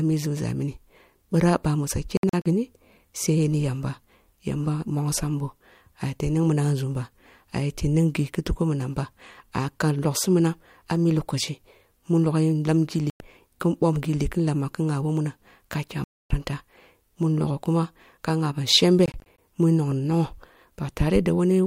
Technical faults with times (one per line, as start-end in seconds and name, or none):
2.17-2.46 Bluetooth dropout
13.10-13.20 Bluetooth dropout
16.04-16.30 Bluetooth dropout
19.06-19.38 Bluetooth dropout